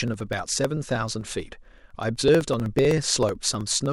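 From about 0.08 s right through to 3.86 s there's a steady run of periodic USB or driver dropouts: every 0.063 s something stalls the audio path and around a millisecond is skipped, so the speech carries a fast, regular ticking, roughly seventy clicks in all.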